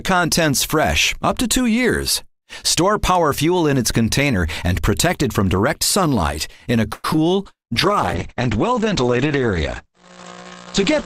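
The call audio runs cleanly until 6.93 s, when a call audio freeze stretches the last sound into a fading buzz or hiss until 7.05 s. It is likely caused by delayed packets draining the jitter buffer, and it shows as a smeared, decaying band on the spectrogram. Two short concealed packet losses follow, at 7.13 to 7.15 s and 7.16 to 7.18 s. Each loses about 20 ms, filled with 11 and 13 ms of extrapolated sound. They are heard as brief smears or wobbles and appear as thin vertical seams. From 7.76 s to the end, a call bitrate drop from 64 to 12 kbps makes the sound rough and muffled. On the spectrogram, energy above about 8 kHz disappears abruptly.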